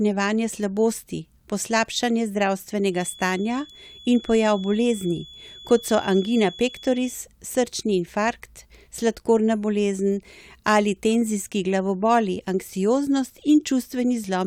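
From 2.89 s to 7.22 s a feedback whistle sits behind the speech: a thin, steady tone at 3.4 kHz, roughly 20 dB below the voice, swelling and fading slowly in level. The likely cause is a loudspeaker-to-microphone loop held just short of runaway feedback, so one frequency keeps ringing without building. On a spectrogram it shows as a narrow horizontal line at 3.4 kHz spanning those times. In the waveform it is barely visible beneath the speech.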